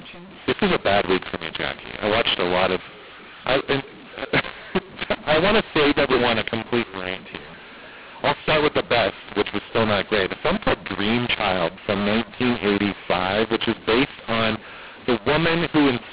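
Throughout the speech, mu-law and A-law are mixed up: samples coded as G.711 mu-law are read back as A-law, scrambling levels so speech turns harsh and pauses fill with hiss. Unlike clipping, quiet passages are distorted too, not just peaks.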